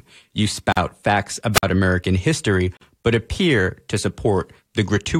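At 0.72 s the speech drops into a silence of about 45 ms. This is a gap at a join of encoded pieces. The audio was encoded in separate chunks and spliced without trimming. Each chunk kept its encoder start delay and its padded final frame, so a hole sits at the seam. Its edges are smeared by the codec. The sound then resumes where it stopped.

At 1.53 s a wireless microphone squelch dropout occurs. The FM radio link faded. A short rise of hiss comes first. Then the receiver's squelch mutes the output for about 52 ms, leaving near silence. The speech comes back by 1.63 s.

At 2.77 s the join gap returns, about 43 ms long, just before "but appear to". It falls 2 s after the first, matching the chunk length. The seam sounds the same: a smeared edge, a dead pause, then continuation.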